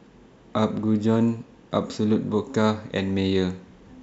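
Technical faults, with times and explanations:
Nothing technical stands out in this speech clip; there's no fault to point to anywhere along it.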